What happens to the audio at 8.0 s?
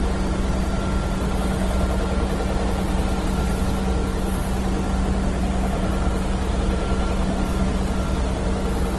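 At 8.0 s the audio carries the same degradation heard across the whole clip: a dull, band-limited sound with nothing above 12 kHz and a mix of smeared, warbly artefacts layered with sharper, swirly coding noise. This is likely transcoding between lossy codecs. A low-rate codec, consistent with Opus at around 16 kbit/s, stripped detail first. An MP3 pass, which fits roughly 49 kbit/s, then spent bits re-encoding those flaws and added its own.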